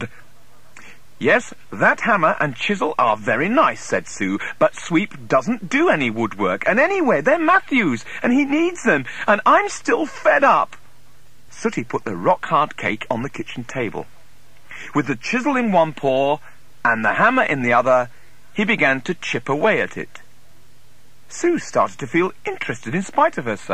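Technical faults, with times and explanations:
No technical faults detected anywhere in the clip.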